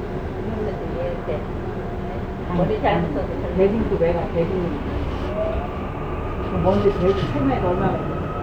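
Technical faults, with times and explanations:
No technical faults detected anywhere in the audio.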